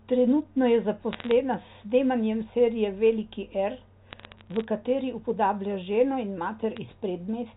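Bursts of bit errors on a digital phone line crackle through the speech from 1.13 to 1.31 s, again from 4.1 to 4.64 s just before "kateri upodablja ženo in", and as a brief tick at 6.77 s after those same words. Flipped bits in the mu-law G.711 stream corrupt single samples, at an error rate of a few tenths of a percent. Unlike packet loss, nothing drops out or repeats. Sharp clicks sit over speech that carries on intact.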